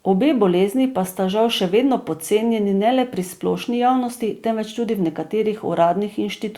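No technical faults can be heard anywhere in the recording.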